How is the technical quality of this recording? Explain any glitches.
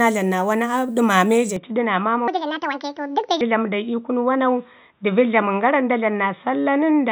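The recording has two clear faults, both starting in its first half.

From 1.56 s to the end, the input was likely switched to a poorer device. The upper frequencies vanish without a gap or level jump, leaving a dull sound and a faint new noise floor. A spectrogram shows a sharp ceiling on the band.

Between 2.28 and 3.41 s, a section runs at the wrong speed, likely from a clock mismatch. At 1.61 times speed it sounds hurried and about seven semitones high, with widened harmonic spacing on a spectrogram.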